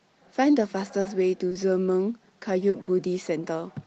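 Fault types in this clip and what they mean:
Short concealed packet loss: A few hundredths of a second of audio didn't reach the decoder in time, so the receiver bridged each gap by stretching the sound just before it, following its pitch if it was voiced or using shaped noise if not, then blending back into the real signal. Here it shows up as brief smears or wobbles: a 40 ms patch at 1.01 s, two 20 ms patches back to back at 1.49 and 1.53 s, and another 40 ms one at 2.69 s.
Burst of packet loss: This is a longer run of missing audio than the short dropouts, here about 60 ms starting at 2.81 s and ending around 2.89 s. The receiver kept the last sound going and let it fade as the gap dragged on, so you hear a held buzz or a thinning hiss in place of the real audio. Playback then picks up further along, with that stretch simply gone, all on top of the Opus call sound, which tops out around 8 kHz.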